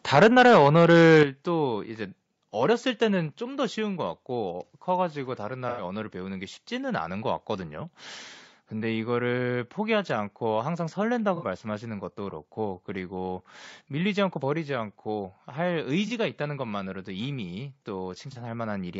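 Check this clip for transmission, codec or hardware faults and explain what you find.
Several faults are audible in this speech clip: a compression layer throughout, an early overload with stepped gain cuts, and four brief dropouts.

Low-delay AAC compression likely runs throughout. Short codec frames at a rate that sounds like about 32 kbps resolve harmonics poorly, leaving the voice plainly rough and grainy.

Microphone overload, likely, from 0.14 to 1.23 s. Input gain drove peaks about 9 dB past the converter's limit, flattening a small share of samples into a harsh crackle.

Microphone volume stepped down, likely by automatic gain control, at 0.23 s (about 3 dB), 1.23 s (about 8 dB), 3.27 s (about 2 dB) and 14.58 s (about 2 dB). Each is an abrupt level drop.

AAC frame loss with concealment at 5.69 s (90 ms), 11.36 s (60 ms), 16.07 s (30 ms) and 18.32 s (30 ms). The decoder patches missing frames from earlier spectra, producing brief smeared, noisy blurs.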